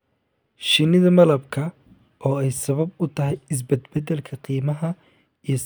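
Nothing in this speech recording stands out as a technical fault, so there's simply nothing here to flag.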